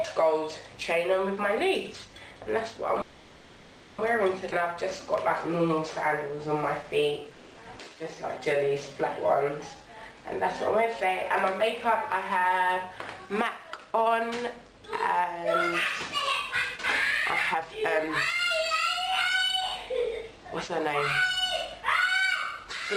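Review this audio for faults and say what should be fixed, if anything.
Call audio freeze, 3.01 to 4.00 s: packets were likely held up in transit and the jitter buffer ran dry, so the receiver stretched the last sound into a fading buzz for about 0.97 s. Playback then resumes where it stopped, with nothing lost but roughly a second of added delay. Prevention: a larger or more adaptive jitter buffer, plus better network prioritisation, would ride out this kind of stall.

Skip ahead, 4.50 to 4.53 s: roughly half a second of audio was dropped while later audio was already waiting. Playback jumps forward almost seamlessly, and the two sides are butted together with only a tiny join. Prevention: draining excess delay gradually through time-scale adjustment, rather than dropping a block, would avoid the missing chunk.

Jitter buffer slow-down, 4.58 to 9.95 s: the buffer was building a reserve, so it repeated pitch periods and slivers of pauses, adding about 373 ms. 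The audio plays at about 93% speed with unchanged pitch, sounding drawn out. Prevention: smaller, less frequent target-delay changes would keep this stretching less audible.

Long network dropout, 7.33 to 7.59 s: a run of packets was likely lost outright, and the receiver concealed the 240 ms gap by extending the preceding sound as a decaying buzz. Audio then returns further along, and that quarter second is gone for good. Prevention: forward error correction or redundant encoding would let the receiver recover short bursts like this.

Jitter buffer speed-up, 10.02 to 14.31 s, 16.21 to 17.99 s and 19.24 to 22.66 s: the buffer held more than its target, so it trimmed short pitch-period pieces repeatedly. Removals total roughly 0.3 s, 0.4 s and 0.15 s, giving speeds of about 106%, 122% and 104%. The middle stretch sounds noticeably rushed. Prevention: capping the compression rate would stop the 122% stretch from sounding hurried.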